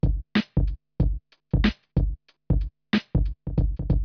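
Nothing here stands out as a technical fault; the audio runs its whole course without any dropouts, glitches or other trouble to point at.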